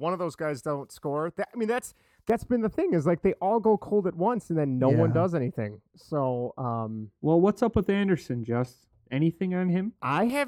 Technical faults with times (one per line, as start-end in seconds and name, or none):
2.30-10.30 de-emphasis applied wrongly